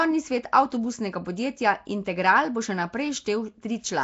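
From start to finish the speech carries a rough, hissy halo and a smeared, underwater blur, with nothing above 7.7 kHz, likely from Nellymoser compression at a rate that fits 32 kbps. Unlike steady background hiss, this noise tracks the speech, filling bands the codec starved of bits.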